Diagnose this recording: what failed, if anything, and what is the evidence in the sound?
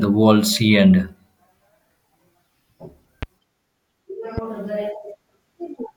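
Two loud pops sit on top of the speech, at 3.23 to 3.25 s and 4.38 to 4.40 s, each a single sharp hit peaking a few dB above the talker while the speech carries on underneath. That points to the analogue wiring stage, likely a loose plug or a switch spike getting into the signal.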